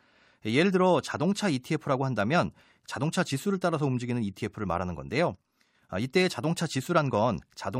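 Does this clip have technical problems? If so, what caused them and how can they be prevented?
No, nothing technical goes wrong anywhere in this recording, so there's nothing to trace back or guard against.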